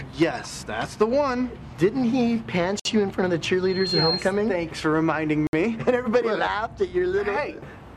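At 2.80 to 2.85 s the sound drops out for about 57 ms and then carries on from where it stopped. That's likely a Bluetooth stall, with the headphone buffer running dry while delayed packets were resent.

From 3.63 to 4.29 s there's a loudspeaker feedback squeal. A mic is picking up its own speaker, and at 4.2 kHz the loop gain tops one, so that tone swells over roughly a third of a second to sit about 5 dB above the program.

A second gap of about 62 ms at 5.47 to 5.53 s is likely the same Bluetooth stall again, with playback cutting to silence and resuming.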